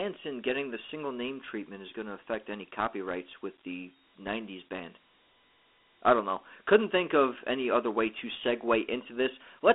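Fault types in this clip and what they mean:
Dialogic VOX ADPCM: the speech has passed through Dialogic (OKI) 4-bit ADPCM, the telephony format used for voice menus and voicemail, where each sample stores only a coarse step change. The clip shows a telephone band of roughly 250 Hz to 3.5 kHz with nothing above 3.8 kHz, which fits 8,000 samples a second at 32 kbps. The quantisation damage is plainly audible as a gritty hiss riding along with the speech.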